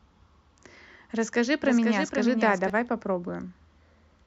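Speech with a doubled audio track from 1.62 to 2.70 s: a full-band copy trails about half a second behind, a few decibels quieter, likely from a second, slower capture path. Unlike an echo, it has no decay or room colour, and it starts and stops abruptly.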